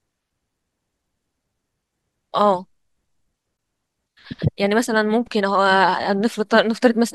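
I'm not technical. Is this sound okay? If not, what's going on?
No. A gap at a join of encoded pieces interrupts the speech at 3.57 s, a brief silence of about 18 milliseconds. The recording was compressed in separate chunks and stitched together; each chunk carried a sliver of padding silence, and that leftover shows up as this dropout before the speech resumes.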